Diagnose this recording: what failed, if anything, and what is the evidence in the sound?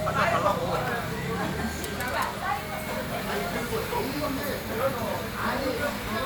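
The failure is overlapping chunks at the buffer stage. A short click-like stutter recurs at 0.88, 1.89, 2.89, 3.90, 4.91 and 5.91 s, almost exactly one second apart. Each join repeats about 7 ms of audio. That regular spacing fits processing in one-second blocks. Each new block begins slightly before the previous one ended. The same few milliseconds of sound therefore play twice at every boundary, breaking the waveform's continuity.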